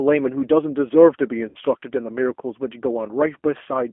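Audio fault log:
Throughout: G.729 codec. The speech is rebuilt from a vocal tract filter, pitch predictor and a few pulses per frame, which fits an 8 kbit/s codec. It sounds plainly rough and synthetic, confined to a telephone band of roughly 250 Hz to 3.4 kHz.
1.49 to 1.59 s: VoIP packet loss concealed by the speech codec. About 60 ms of audio goes missing, which fits three 20 ms packets. The decoder stretches its last pitch and filter into a buzzy tone or coloured noise that fades, and speech stays weakened briefly after recovery.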